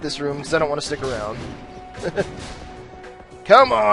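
No technical faults can be heard anywhere in the recording, and the signal stays steady and intact throughout.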